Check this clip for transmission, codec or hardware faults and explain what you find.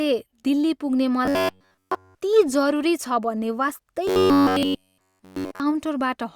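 Two stretches of robotic sound from repeated short buffers are present in this speech clip.

From 1.25 to 2.15 s, right after "दिल्ली पुग्ने", and again from 4.08 to 5.60 s, the speech collapses into a rigid metallic buzz at 93.8 Hz that only loosely tracks the syllables, with the repetition running essentially throughout both spans. The likely cause is audio arriving too slowly, so the playback side keeps looping a segment of about 10.7 ms while the real signal is dropped, and that loop imposes the fixed buzz pitch.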